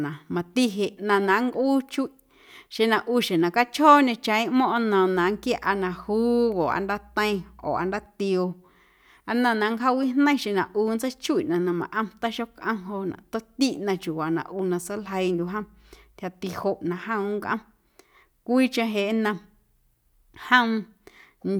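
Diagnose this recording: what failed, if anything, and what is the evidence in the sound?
Mains hum in the analogue wiring: a steady 60 Hz power-line tone couples into the speech from 5.16 to 8.06 s, roughly 30 dB down.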